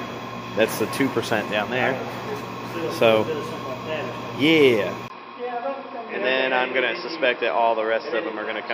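At 5.08 s the recording likely switched to a poorer input device, which passes nothing above 5.5 kHz. After a brief gap of about 20 ms, the sound turns dull and boxy through to the end, drops a few dB in level, and carries a new noise floor roughly 30 dB down.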